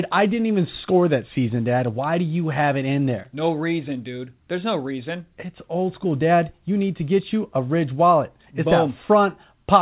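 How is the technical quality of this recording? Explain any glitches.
Nothing stood out as a glitch on listening, and the narrow, telephone-like sound with nothing above 4 kHz fits the call path's G.711 mu-law coding rather than any fault.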